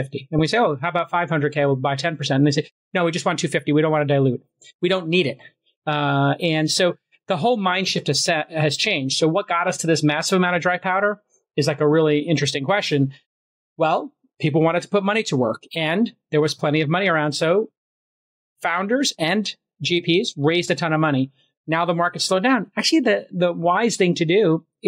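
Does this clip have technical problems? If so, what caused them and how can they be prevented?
No, the signal shows no technical faults, so there is nothing here that needs a cause or a preventive fix.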